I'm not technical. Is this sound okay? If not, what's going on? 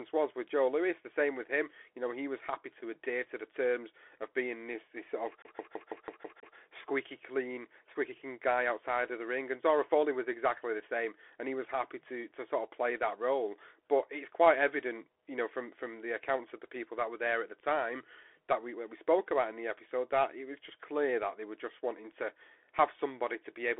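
No. Throughout, the speech sounds muffled and scratchy with a grainy hiss, as on a phone call. That's the Bluetooth CVSD headset codec, which drops everything above 3.8 kHz.

From 5.42 to 6.56 s, right after "this this sort of", a sliver of about 0.16 s stutters seven times before "squeaky clean squeaky clean". It's a CD stuck on one turn, jumping back repeatedly.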